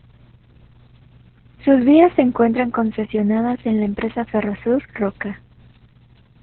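Opus voice compression runs through the whole clip, with heavy damage throughout. The speech has nothing above 4.2 kHz, so the codec has narrowed it to telephone-style narrowband and handled it with its SILK linear-prediction coder. The excitation is coded very coarsely, which fits a bitrate around 6 kbps. The voice sounds muffled and hoarse, with a slightly robotic, buzzy edge from that coarsely coded excitation.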